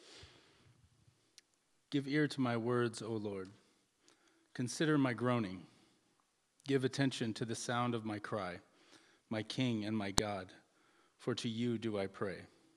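At 10.18 s a sharp, loud click snaps through the sound: a file header played as audio. Where a second piece of audio was joined on, its header bytes were never stripped, so that block of non-audio data was read out as a burst of samples. On the waveform it shows as a tall, jagged spike lasting only a couple of milliseconds; on a spectrogram, a thin vertical stripe spanning the full frequency range.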